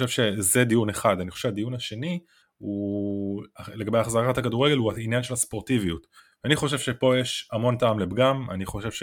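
Listening through this speech recording, nothing stood out as a technical fault at any point.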